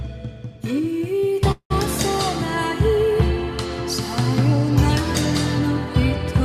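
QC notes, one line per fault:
1.51–1.72 s, call audio freeze: the sound stalls for about 0.2 s, with the last instant held as a decaying buzz that falls to silence for roughly its final 90 ms before the audio resumes exactly where it stopped. The likely cause is delayed packets emptying the jitter buffer. Unlike a packet-loss dropout, nothing is cut out: a gap is inserted, and everything after it arrives about 188 ms later than before.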